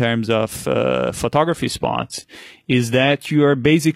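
At 1.48 s, just after "of uh", the speech switches to an adaptive stream at a lower bitrate until the end. Nothing above 14.9 kHz remains, which fits a drop from 96 kbit/s AAC to 20 kbit/s HE-AAC. Unlike a dropout, the change is sudden and leaves no gap.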